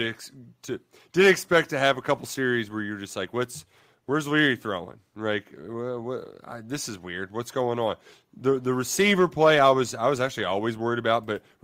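No audible faults are present in this speech recording; nothing in it calls for comment.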